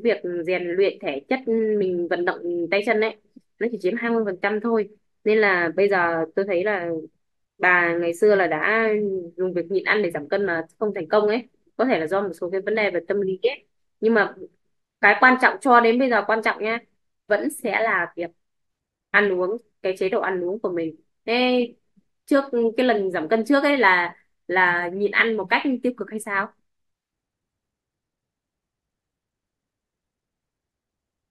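No technical faults occur anywhere in the recording.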